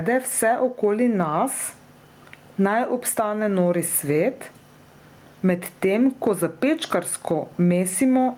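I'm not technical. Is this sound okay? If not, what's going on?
No. The whole clip has gain pumping: the level is pulled down each time the speech gets loud and comes back up after, so it keeps breathing in and out by a large amount, and the sound is squashed. The likely cause is a microphone set far too loud, with an automatic limiter constantly pulling it back down.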